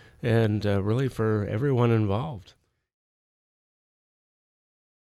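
The signal shows no technical faults; the level eases down in a smooth fade-out that begins around 2 s and is complete by 2.99 s, with no click or hard edge.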